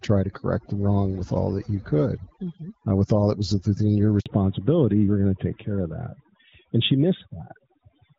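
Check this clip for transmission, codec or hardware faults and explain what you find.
Three faults are audible in this speech.

Overdone noise removal, throughout: over-aggressive suppression zeroes bands near the noise estimate. The background sounds hushed with twinkling specks. On a spectrogram the quiet regions look blotchy.

Handover gap, 4.20 to 4.26 s, just after "that was within your": no frames arrived during a network switch, leaving 60 ms of silence. The waveform shows a flat dropout.

Fallback to narrowband, from 4.26 s to the end: the call leaves HD Voice for a narrowband codec, fitting AMR-NB. The voice turns duller and rougher, and the spectrogram shows a hard ceiling at 4 kHz.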